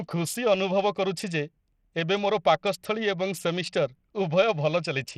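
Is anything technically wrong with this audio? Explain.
Yes. Throughout, the speech has flickering, dropping treble and gritty noise, likely Bluetooth SBC compression starved of bits, fitting roughly 80 kbps, grainy rather than the swirly smearing of MP3.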